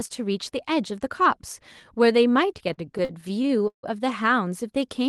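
From 2.57 s to 3.85 s the speech hits repeated stalls, a stutter where about a dozen short gaps get papered over. Packets were arriving late or slower than playback, so the jitter buffer kept draining, and each time the receiver stretched out the last bit of sound until it could resume. Around 340 ms gets filled that way, roughly a quarter of that stretch, with the longest hold at 154 ms. Nothing's actually lost, but the speech drags and catches there. The top end tops out near 12 kHz, which fits a call codec.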